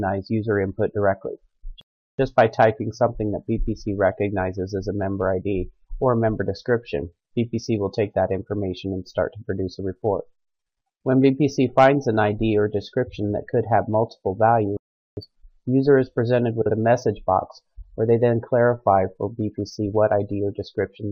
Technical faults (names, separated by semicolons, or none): playback stall; frames out of order